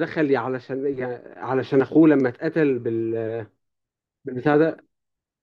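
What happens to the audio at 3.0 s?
Nothing goes wrong at 3.0 s; the speech runs on intact through that moment, with no dropout, click or other fault to be heard.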